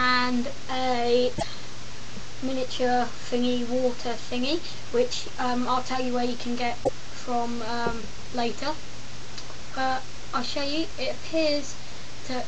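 Broken MP3 bit reservoir at 1.37–1.43 s and 6.83–6.89 s: the audio jumps ahead and about two 26.1 ms frames come out garbled, likely because frames were lost and the following frames borrowed their missing data from bytes belonging to other frames.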